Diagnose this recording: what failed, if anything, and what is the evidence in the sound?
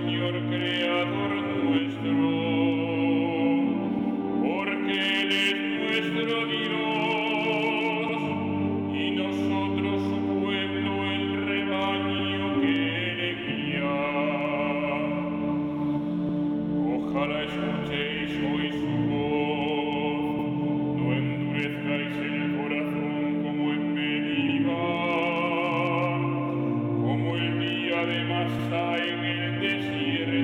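The chunked processing or buffer stage failed with overlapping chunks: a 100 ms stutter at 3.99, 8.09, 12.19, 16.29, 20.39, 24.49 and 28.59 s. Each 4-second chunk starts before the previous one ends, so that last 100 ms plays twice at every join.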